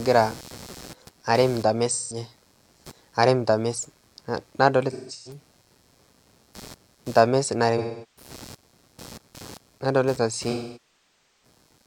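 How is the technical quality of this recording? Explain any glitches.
The recording is marred by two faults: a persistent electrical buzz and four patches where the speech turns smeared.

Computer activity noise runs throughout. Load changes in the computer disturb the shared audio ground, producing a chirpy buzz pulsing at around 150 Hz, roughly 25 dB below the speech. Unlike steady mains hum, it varies with the computer's workload rather than the talking.

AAC frame loss with concealment occurs at 1.88–2.17 s, 4.91–5.40 s, 7.77–8.31 s and 10.51–11.43 s. The decoder patches the missing audio from the last good spectrum. Short losses sound like noisy, phasey smears rather than clean gaps. The longest, at nearly 0.9 s, decays toward silence before recovering.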